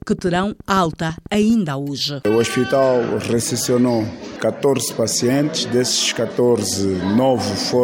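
From 0.02 s to 1.51 s a train of clicks runs over the audio, about twenty sharp pulses arriving at a regular 12.2 per second and peaking at roughly the level of the sound itself. It is heard as a steady ticking that continues through pauses. The likely cause is interference from nearby equipment or a faulty connection or power supply injecting near-identical pulses. On a waveform they show as evenly spaced spikes of matching shape, and on a spectrogram as thin vertical broadband lines at even intervals.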